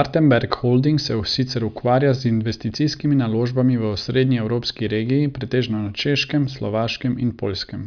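No technical faults can be heard anywhere in the recording, and the signal holds steady from its opening moment to its last.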